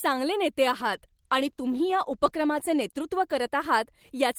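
Speech that turns rough and watery, with the top end dulled, from 0.61 s until about 4.15 s, and is roughest for about 1.7 s within that span. This is a call bitrate drop: the falling bandwidth estimate made the encoder code more coarsely, consistent with a fall from about 32 to 15 kbps.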